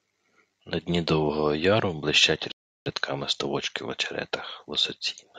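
At 2.52 s the speech drops to silence. It stays silent until 2.86 s, then picks up exactly where it left off. This is a rebuffering stall. The player used up the audio it had downloaded and had to wait for more before it could go on. No speech is skipped or repeated. The gap simply stretches the timeline by about 0.34 s. It sounds like an unnatural pause cutting into the flow.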